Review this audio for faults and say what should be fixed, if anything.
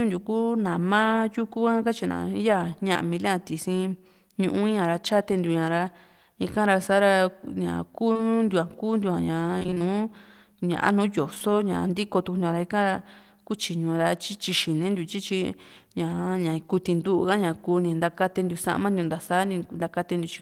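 Short concealed packet loss occurs at 2.93–2.97 s, 8.13–8.21 s (two consecutive holes) and 11.34–11.43 s (again two back to back). Each gap matches a lost 20 ms packet. The decoder extended the preceding sound to cover it, leaving a brief smear or wobble before blending back. To prevent it, increase jitter-buffer depth or add forward error correction so late or lost packets can be recovered rather than concealed.

A DC step shifts the waveform's zero line at 5.32 s and returns at 11.75 s. Each jump is heard as a low thump or click while the sound continues unchanged, consistent with an offset being switched in and then removed, such as a converter recalibration or input change. To prevent it, apply a DC-blocking high-pass filter ahead of encoding and avoid input switching or recalibration mid-stream.

Repeated packet loss (robotic sound) occurs from 9.59 to 9.82 s. Within about a quarter second there are roughly six gaps, the longest about 24 ms, and around half of that span is concealment rather than received audio. 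The successive patches make the sound choppy, with pieces missing. To prevent it, address the network congestion or burst loss on that link and use redundancy or a larger adaptive buffer to absorb such bursts.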